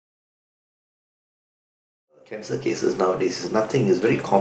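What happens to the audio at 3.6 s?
Nothing goes wrong at 3.6 s; the audio there is intact, with no dropout, click or other fault.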